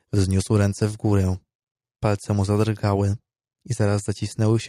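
No technical faults can be heard anywhere in the speech.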